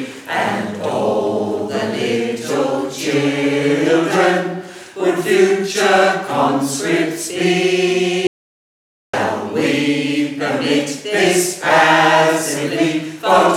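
From 8.27 to 9.13 s the sound cuts to silence for 0.86 s, an audio dropout to silence, likely from the input briefly disconnecting.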